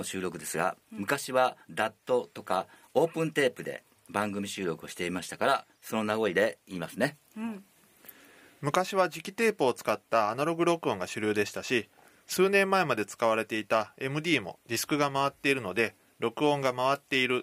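The signal holds steady from beginning to end, with no dropouts, level disturbances or other technical problems audible anywhere in the recording.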